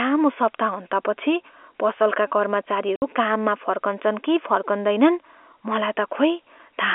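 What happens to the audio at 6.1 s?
Nothing goes wrong at 6.1 s: the speech carries on intact, with the narrow band and faint, level-following quantisation hiss of ordinary G.711 telephone coding.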